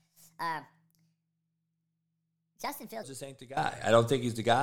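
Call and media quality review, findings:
Section at the wrong speed, 0.00 to 3.03 s: likely clock or resampling mismatch in the playback or editing stage, running the segment at 1.36x. Speech hurried, pitch raised about five semitones, tempo and pitch shifted together.

Sudden gain jump at 3.57 s, holding to the end: digital gain stepped by about 15 dB between adjacent samples, likely a gain setting applied without a ramp. Speech and background noise jump up together, abrupt level change.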